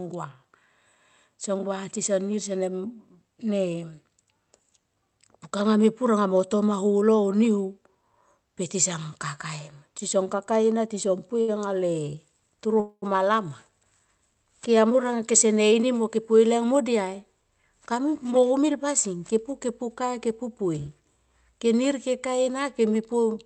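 At 11.41 to 11.50 s a short stall from a late packet holds the last sound for about 66 ms, giving a slight buzzy drag with nothing lost. From 12.80 to 13.04 s a call audio freeze, likely from packets held up in transit, fills 221 ms, including about 60 ms of silence, then resumes where it stopped. Jitter buffer speed-ups follow at 15.31 to 16.18 s (107%, roughly 70 ms trimmed) and 17.34 to 19.14 s (106%, roughly 100 ms trimmed), so the speech sounds hurried at unchanged pitch. The band-limited call sound points to Opus at 32 kbps with an 8 kHz bandwidth.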